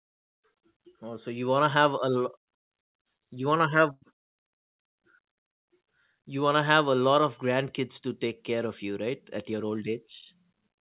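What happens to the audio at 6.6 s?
Nothing goes wrong at 6.6 s: the speech there passes through the call path intact, carrying only the narrow telephone-band sound of the G.711 mu-law codec, with nothing above 4 kHz.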